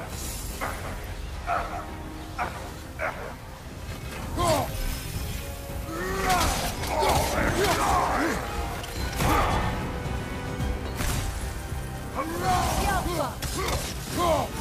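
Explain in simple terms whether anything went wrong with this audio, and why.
Nothing went wrong with this audio that a careful listener can pick out. At no point does anything in the sound suggest a technical problem with how it was recorded or played back.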